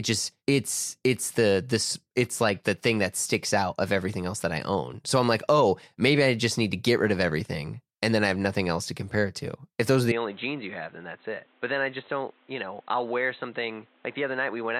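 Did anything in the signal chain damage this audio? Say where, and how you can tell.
Yes. From 10.12 s, right after "those are", to the end of the clip, the speech abruptly turns dull and boxy, with nothing above 4 kHz. It is about 5 dB quieter and has a new background noise floor roughly 30 dB below the speech. There is no gap at the change. This is likely an input switched to a poorer device at the capture stage, either another microphone or a headset's call profile, with a narrower band, different tone and its own noise.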